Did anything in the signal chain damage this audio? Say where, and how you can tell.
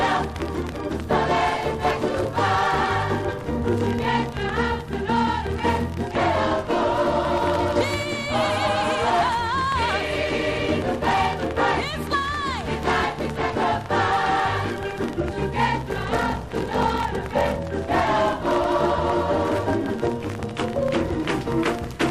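Yes, there's a block size mismatch (padded) at the driver or buffer stage from 15.89 to 17.59 s. You get a 46.9 Hz buzz and the sound slows to 0.861 speed at unchanged timbre. That fits short blocks being zero-padded into a 1024-sample read.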